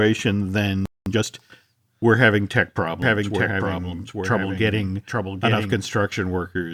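A playback stall runs from 0.86 to 1.06 s: the speech cuts out mid-flow for about 210 ms, most likely because the player ran dry of buffered data or its output thread was blocked.

Time-compressed catch-up follows from 1.06 to 1.26 s, as the player trims its backlog by cutting and cross-fading short slices. The speech runs at twice its normal rate while keeping its pitch.

A doubled audio track starts at 3.02 s, just after "we're having tech", and stops abruptly at 5.74 s. A second full-band copy of the speech trails about a second behind, roughly 5 dB quieter, with no decay or room colour. It is likely a second capture through a slower path.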